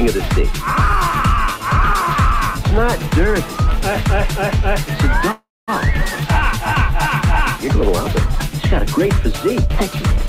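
Call audio freeze, 5.31 to 5.70 s: the last sound trails off into 220 ms of silence, likely from stalled packets draining the jitter buffer. It then resumes intact, 362 ms late.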